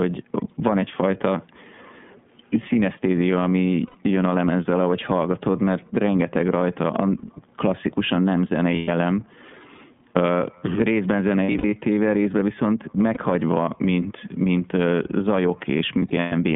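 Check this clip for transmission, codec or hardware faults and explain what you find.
Yes, there are two problems: the whole speech clip has been through the iLBC codec, and there are several dropouts from lost iLBC frames.

The iLBC codec runs throughout at about 13.3 kbps with 30 ms frames. It squeezes the line to roughly 150 Hz to 3.5 kHz and codes each frame on its own. The result is thin, plainly rough and synthetic-sounding speech.

Lost iLBC frames show up at 3.87 to 3.96 s, 8.75 to 8.89 s, 11.43 to 11.74 s, 13.14 to 13.18 s and 15.99 to 16.33 s. The decoder fills each hole by repeating the last pitch cycle mixed with noise, so you hear a held, slightly buzzy vowel. The first, second and fourth gaps fit runs of 30 ms frames. The 11.4 s and 16.0 s events are scattered losses, each adding up to about 180 ms, with the longest single runs around 70 ms and 100 ms respectively. Speech snaps back almost straight away after each one.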